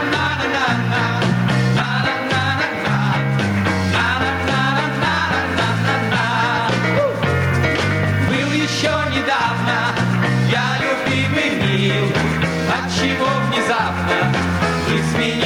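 Gain pumping runs through the whole recording: the gain ducks by around 10 dB under every loud sound. The waveform looks squashed, with an even envelope, and the spectrogram's noise floor rises and falls. The likely cause is excessive input gain feeding a fast limiter.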